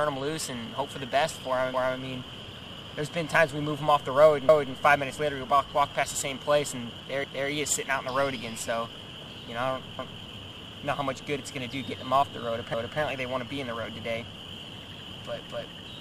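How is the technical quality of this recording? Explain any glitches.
The recording has one recurring fault, overlapping chunks, at 4.49, 7.24, 9.99 and 12.74 s. At each join a new 2.5 s chunk begins 250 ms before the previous one ended, so that quarter-second plays twice, heard as a stutter every 2.75 s. Unlike a dropout, nothing goes missing; audio repeats.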